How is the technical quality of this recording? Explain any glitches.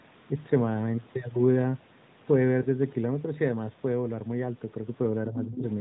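The recording has three glitches, all in the short, band-limited speech typical of a narrowband mobile call (nothing above 4 kHz, light codec colouring consistent with 12.2 kbps AMR-NB).

At 2.62 to 2.67 s there are lost AMR speech frames. A single 20 ms frame went missing, and the decoder filled it by repeating the previous pitch and spectral settings at reduced gain. This produces a brief dip or warble.

From 5.27 to 5.64 s the speech is suppressed in double talk. The level falls by up to about 15 dB over roughly 300 ms. The likely cause is the echo canceller attenuating the talker while both sides spoke at once.

From 5.41 to 5.59 s the other side's voice leaks through. A second voice sits about 10 dB below the speech, likely loudspeaker echo the canceller did not fully remove from the microphone.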